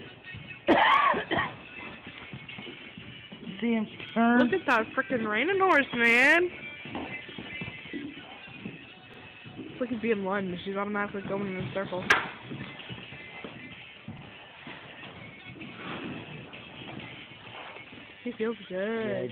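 A brief stutter, a tiny slice of sound played twice, recurs at 4.09, 9.14 and 14.19 s. These are overlapping chunks: the audio was handled in 5.0 s blocks, each beginning about 48 ms before the previous one ended, so every join repeats that overlap.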